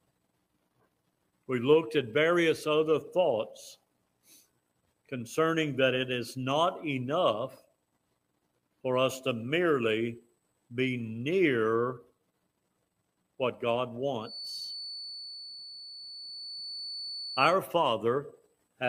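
From 14.2 to 17.59 s there's a feedback whistle, a thin steady tone at 4.5 kHz around 15 dB under the sound, likely a speaker-to-mic loop teetering just short of howling.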